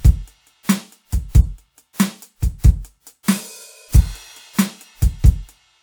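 Pre-echo appears three times in this music clip, just ahead of sharp attacks: from 0.63 to 0.69 s (about 56 ms), from 2.58 to 2.64 s (about 53 ms), and from 3.23 to 3.28 s (about 50 ms). In each case a transform codec spread quantisation noise across its block, so noise meant for the loud attack also fills the quiet moment before it. The result is a short hiss leading into each attack, which itself sounds softened and smeared. On a spectrogram this shows as a thin vertical smear of broadband energy just before each onset. On the waveform, low-level noise rises ahead of the transient instead of the attack starting cleanly from quiet.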